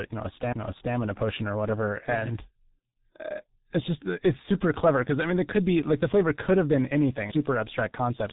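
Throughout, the speech carries heavy G.723.1 codec damage: nothing above 3.8 kHz, a muffled, hoarse tone and smeared consonants, consistent with a roughly 6.3 kbit/s low-rate telephony coder.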